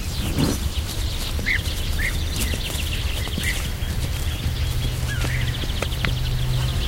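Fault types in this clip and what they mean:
Clock slip clicks: a faint, fast rattle made of tiny ticks that runs through the sound from about 0.10 s to 6.86 s. The ticks come roughly every 20 ms, around 300 in all, each a jump of a single sample. This is likely two devices running on free clocks about 1000 ppm apart, so a sample gets dropped or repeated each time their drift builds to a whole sample.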